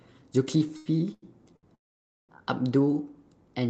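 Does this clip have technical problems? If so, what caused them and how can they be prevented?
Yes. From 0.67 to 1.65 s there are repeated stalls (stutter): four gaps, the longest 90 ms, totalling 255 ms. The jitter buffer emptied, and the last sound was stretched to fill each gap. On a spectrogram these show as smeared, repeated slices between normal frames. Deeper jitter buffering and steadier network delivery prevent this.

From 1.75 to 2.31 s there is a call audio freeze, likely from packets held up in transit. The audio stops for about 540 ms, and most of that is roughly 510 ms of silence after a brief fade. The waveform shows a flat gap before the audio resumes where it left off. A more stable connection with less congestion would prevent it.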